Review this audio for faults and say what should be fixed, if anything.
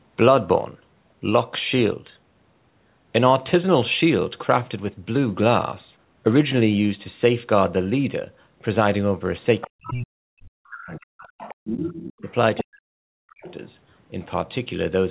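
The other side's voice leaking through shows up as a second, fainter voice at 9.61–9.92 s, 10.95–11.55 s, 11.94–12.64 s and 13.3–13.53 s, sitting roughly 10 to 20 dB under the main talker. It is likely residual loudspeaker echo that the echo canceller failed to subtract from the microphone signal. On a spectrogram it appears as a second set of harmonic striations overlapping the talker's, all confined below 4 kHz by the call's narrowband path. Better acoustic isolation or a headset, plus a well-converged echo canceller, would prevent it.

Speech suppressed in double talk cuts into the talker at 9.66–11.09 s, 11.56–12.29 s and 12.63–13.43 s, right as the leaked voice overlaps, with the level falling by something like 40 dB at its deepest. The likely cause is the echo suppressor treating the near-end voice as echo and attenuating everything. A waveform shows the envelope collapsing to near silence in chunks, and a spectrogram shows the speech energy blanking out in vertical gaps. 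Tuning the double-talk detector to be less aggressive would prevent it.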